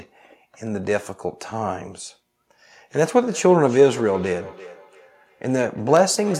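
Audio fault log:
3.27–6.39 s, feedback echo between two devices: the speech returns roughly every third of a second, thinner and more ringing on each pass, peaking about 19 dB below the direct speech. A second device in the room replays this microphone's signal, which is picked up again, and neither echo canceller removes the other device's output.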